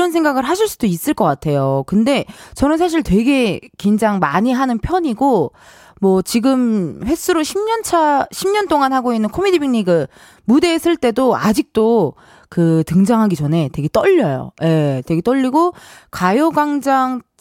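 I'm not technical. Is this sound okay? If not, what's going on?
Yes, there's nothing wrong with this recording.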